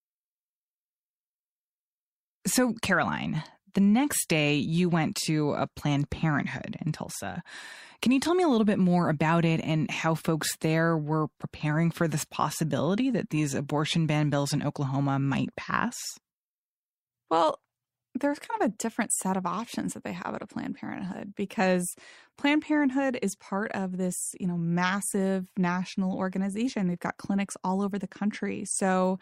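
Speech recording with no audible technical faults anywhere.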